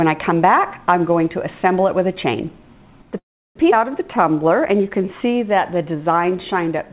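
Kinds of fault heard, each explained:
Call audio freeze: at 3.18 s the sound stalls for about 0.39 s. A short decaying continuation of the last sound drops into near-silence for about 0.34 s, which likely means delayed packets drained the jitter buffer. Nothing is lost. The waveform shows a flat gap and the spectrogram a blank column.
Skip ahead: at 3.71 s playback jumps forward with almost no gap, and roughly a fifth of a second of audio is gone. The two sides are spliced nearly directly. The waveform shows an abrupt seam and the spectrogram a sudden discontinuity where patterns fail to continue.
Jitter buffer slow-down: from 4.17 to 6.36 s the receiver repeats single pitch periods to rebuild its reserve. That adds 217 ms, so the audio runs at 90% speed with unchanged pitch. The spectrogram shows stretched harmonics, and the waveform shows repeated near-identical cycles.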